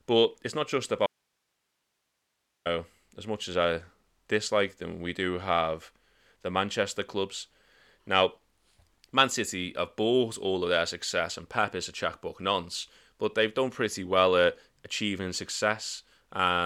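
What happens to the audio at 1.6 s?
At 1.6 s you're right in the middle of an audio dropout to a faint residue. The speech cuts off abruptly at 1.06 s, just after "it's not just", and comes back at 2.66 s with "as much as I", so about 1.59 s goes missing. The gap holds nothing but hiss, roughly 50 dB below the speech. The likely cause is the signal being lost upstream while the path after the break stayed live, so you hear its noise floor instead of silence.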